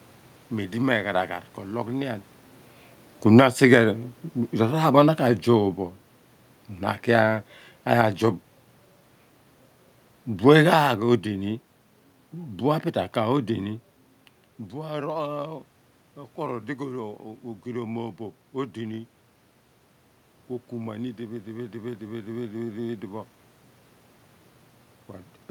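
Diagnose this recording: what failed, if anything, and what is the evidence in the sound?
Automatic gain falling, in call processing. From 3.22 to 13.78 s, speech and room noise sink together, about 10 dB, as gain is gradually lowered.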